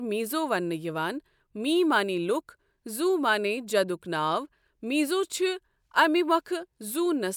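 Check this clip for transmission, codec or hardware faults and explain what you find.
No faults found in this speech recording.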